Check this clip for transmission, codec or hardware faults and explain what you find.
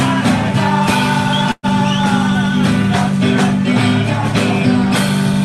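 One transmission fault is audible, heard through a call path whose top end stops around 12 kHz. A burst of packet loss runs from 1.51 to 1.66 s. About 120 ms of audio never arrived, so the receiver extended the last sound for 116 ms while fading it, then went silent for 40 ms before resuming further along. Unlike a plain dropout, the gap begins with that decaying fill rather than abrupt silence, and material is skipped rather than delayed.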